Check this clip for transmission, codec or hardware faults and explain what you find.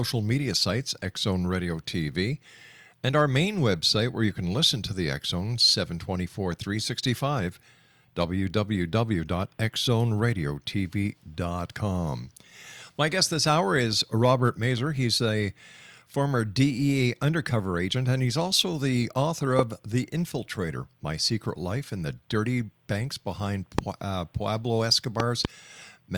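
Found three loud pops in the speech: right after "he's also the author" at 19.59 to 19.61 s, at 23.79 to 23.81 s, and a double pop from 25.20 to 25.47 s. Each jumps about 20 dB above the speech, most likely a voltage spike from a plug, switch, static or driver glitch, while the speech carries on underneath.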